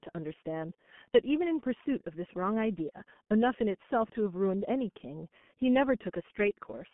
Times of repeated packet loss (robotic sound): none

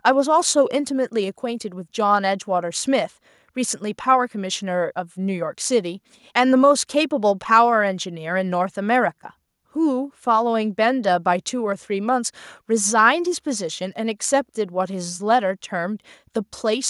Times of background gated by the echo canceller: none

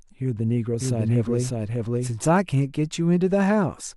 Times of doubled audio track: 0.80-2.10

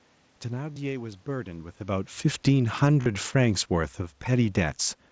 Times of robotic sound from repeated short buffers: none

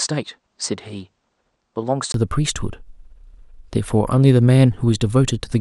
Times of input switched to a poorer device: 0.00-2.14

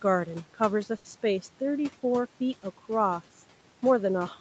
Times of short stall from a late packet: 0.97-1.07

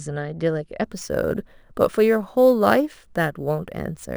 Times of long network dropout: none

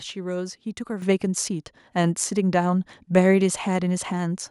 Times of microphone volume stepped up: 1.02

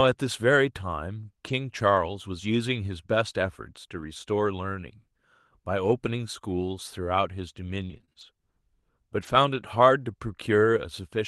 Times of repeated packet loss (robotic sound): 7.85-8.23

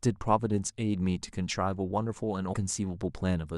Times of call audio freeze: none

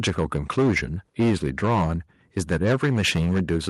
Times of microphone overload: 0.04-0.78, 1.20-1.93, 2.37-3.69

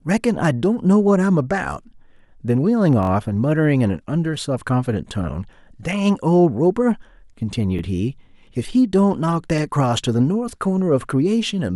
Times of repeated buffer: 3.03-3.09, 7.79-7.81

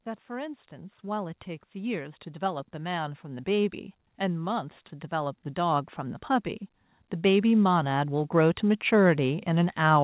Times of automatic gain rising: 0.05-6.27, 6.88-10.04

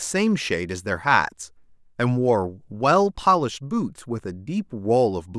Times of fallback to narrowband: none

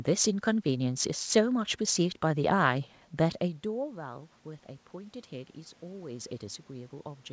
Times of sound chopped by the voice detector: none

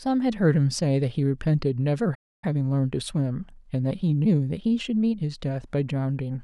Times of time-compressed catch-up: 2.44-5.22

